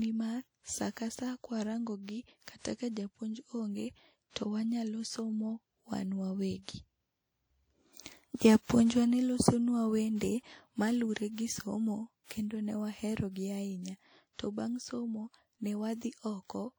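Throughout this speech clip there is a ringing, washy quality, with a hiss that swells and fades along with the talking. This is most likely WMA compression from the first-generation Windows Media Audio encoder. It handles the audio in long transform blocks, spreading quantisation noise over tens of milliseconds and dropping weak detail. The damage is plainly audible and fits a low bitrate of around 48 kbps, even though the band still reaches up to about 20.1 kHz. At 2.43 to 2.48 s, just before "kata ka", a short hiss rises out of the quiet ahead of the attack, and the onset sounds softened. This is pre-echo. The sharp attack falls late in a transform block, and the coarse noise meant to hide the loud part spreads backward across about 48 ms into the near-silence before it.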